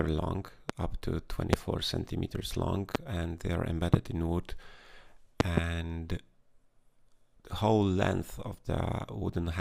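Loud pops at 0.70, 1.53, 2.95, 3.94 s, and a double pop at 5.40–5.60 s, roughly 20 to 25 dB above the audio, most likely voltage spikes from switching or static.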